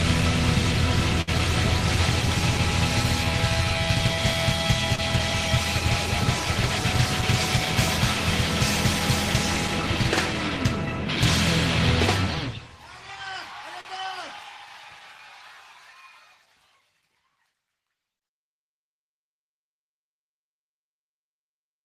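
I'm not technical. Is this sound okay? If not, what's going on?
No. At 1.21 to 1.29 s and again at 13.81 to 13.87 s, the sound briefly holds still, as if frozen, for about 60 ms and then 42 ms. This is a short stall from a late packet: a piece of audio arrived late, so the player stretched the last sound while waiting, then carried on with nothing lost, just slightly later.

At 4.95 to 5.00 s there is a brief smear or wobble. This is short concealed packet loss: about 20 ms of audio never arrived, and the player covered the gap by imitating the sound just before it, then blending back into the real audio.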